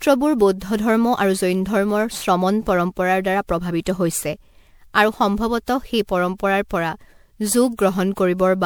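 Throughout the speech, generation loss makes it swirly, hollow and smeared, with blurred attacks. The likely cause is roughly ten successive MP3 encodes at 128 kbit/s.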